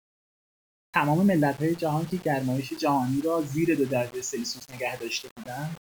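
Across the whole speech clip there is grainy distortion that rises and falls with the signal rather than sitting underneath it as a steady hiss. Quiet syllables and decays turn rough, and the softest passages sputter or collapse into silence. This is likely low bit depth without dither: the error is locked to the waveform, sitting at roughly 20 dB below the speech, which fits a 6-bit quantisation with rounding.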